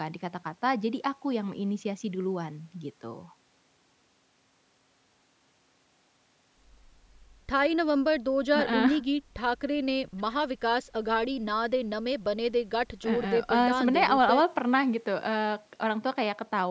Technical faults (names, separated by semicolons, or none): none